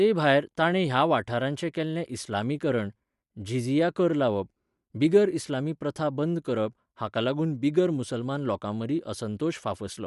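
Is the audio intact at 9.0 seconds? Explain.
No. At 9.0 seconds, as across the whole clip, the speech carries plainly audible damage that is likely Bluetooth LC3 compression. This transform codec works in short blocks, here consistent with 10 ms frames, and at a modest rate, around 48 kbps, it drops fine upper detail and fills gaps with shaped noise. The result is a grainy, breathy edge on the speech, and nothing remains above about 11.5 kHz.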